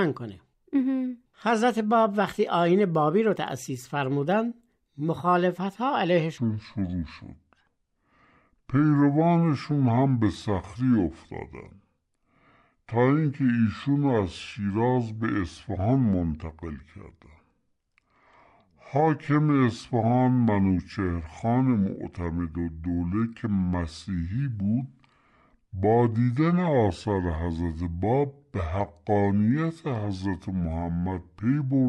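At 6.38 s the speech suddenly drops into a section at the wrong speed, and it stays that way right to the end. From there it plays at 0.64 times its proper rate, so everything drags and the pitch sinks by roughly seven semitones, leaving the voice deep, slow and heavy. Because speed and pitch shift together at that exact moment, the likely cause is that this stretch was run against the wrong clock during editing or playback.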